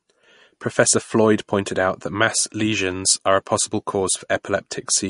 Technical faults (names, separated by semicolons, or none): MP3 compression